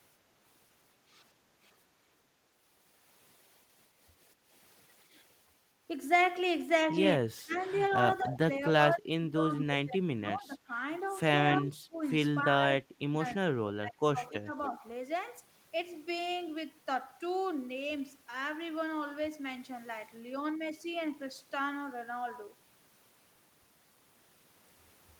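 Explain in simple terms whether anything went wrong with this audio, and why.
Several things went wrong. Background gated by the echo canceller: at 1.33–1.59 s and 4.34–4.52 s the room sound briefly dips while the canceller clamps down on the microphone.

Speech suppressed in double talk: at 7.15–7.63, 7.96–10.74, 11.59–12.02, 12.45–13.23 and 13.76–14.73 s the speech sinks sharply or breaks up, likely because the canceller muted it while both sides talked.

Echo leak: at 7.53–7.91 s a faint, delayed copy of the speech, trailing by about a quarter second, comes through, likely echo the canceller failed to remove.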